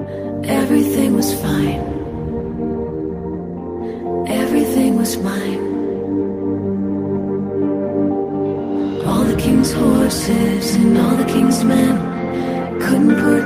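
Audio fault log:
No technical faults can be heard anywhere in the signal.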